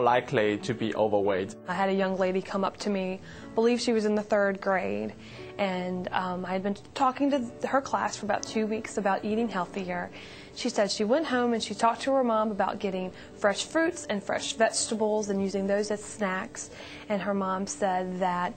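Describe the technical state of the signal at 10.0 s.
At 10.0 s the signal is intact, with no fault present.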